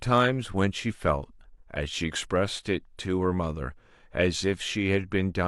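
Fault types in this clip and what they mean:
The speech signal stays continuous and steady throughout, with level, timing and tone holding even from beginning to end.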